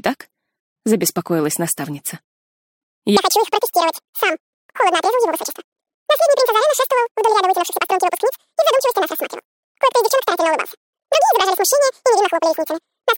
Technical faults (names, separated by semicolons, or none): audio read two samples at a time (double speed)